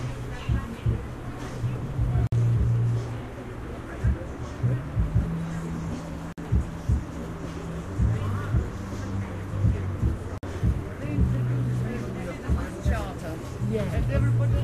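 A recording of sounds drops into brief silences of about 53 to 54 ms at 2.27, 6.32 and 10.38 s, repeating every 4 s with softened edges. These are gaps at joins of encoded pieces: separately encoded segments were spliced untrimmed, keeping encoder delay and end padding.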